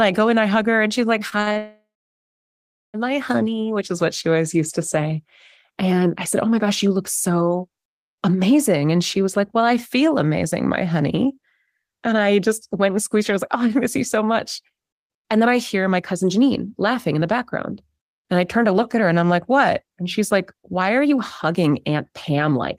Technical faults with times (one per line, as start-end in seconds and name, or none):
1.29-1.58 repeated stalls (stutter)
1.58-2.96 call audio freeze
14.61-22.52 jitter buffer speed-up